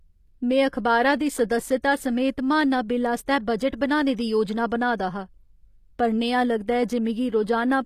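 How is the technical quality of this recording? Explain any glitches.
The technical quality is compromised: the speech carries audible codec damage throughout, plus two brief smears before sharp onsets.

HE-AAC compression, likely the cause, runs through the whole clip. The treble above the coded band is rebuilt from copied lower bands rather than the original, so s sounds turn gritty and lispy, and nothing is present above 14.9 kHz. The damage fits a low bitrate of around 24 kbps. Unlike a plain low-pass, the top stays bright but sounds synthetic.

Pre-echo appears from 3.70 to 3.73 s, between "समेत महाना बिल आस्तै" and "बनाने दी योजना बनाऽ", and again at 4.17 s, just before "दी योजना बनाऽ दा". Each time, quantisation noise sized for a loud attack spills into the quiet moment ahead of it, spreading about 28 ms and 19 ms respectively. A short hiss precedes each attack and softens it. Unlike the constant band-replication grit, this hiss is confined to the instant before onsets.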